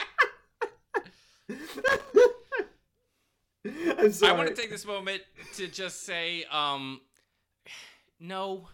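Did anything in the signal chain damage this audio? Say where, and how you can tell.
Yes. The damage is in the analogue wiring: a loose connector crackle caused by a worn or dirty contact that keeps making and breaking as the plug moves. Each interruption chops the speech signal, and any DC offset on the line turns those breaks into pops. You hear an irregular burst of scratchy crackle from 1.73 to 2.11 s, then a shorter one from 4.63 to 4.72 s, between "I want to" and "this moment to just".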